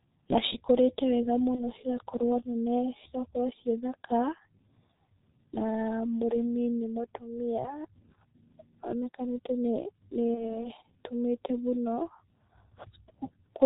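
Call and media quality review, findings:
G.723.1 codec, entire clip: speech muffled and hoarse, no content above 4 kHz, consonants smeared. Heavy codec damage consistent with the 6.3 kbit/s mode. Cause: low-rate coding in 30 ms frames with a slowly updated vocal-tract model, so fast spectral changes at consonant onsets are averaged away and the excitation sounds rough rather than clean.

VoIP packet loss concealed by the speech codec, 1.55–1.61 s, between "na cikũrĩte wega" and "cigakorwo nene cigakorwo ciĩ": a brief stretched patch with a dip in level, which fits one lost 30 ms frame. Second event at 10.34–10.67 s: the same extrapolation over one lost 30 ms frame, then weak, distorted speech as it recovers. Cause: the decoder replays the last pitch and filter at falling gain. Because each frame's state builds on the previous one, recovery lags after packets resume.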